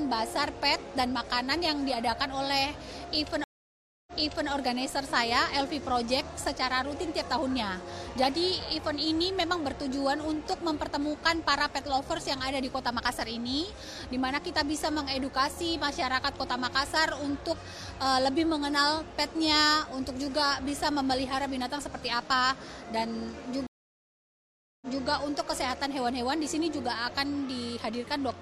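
Two stream reconnects break the audio at 3.44 s and 23.67 s: silent gaps of 0.63 s and 1.15 s, flat on the waveform, then material repeating from 0.42 s and 0.23 s earlier.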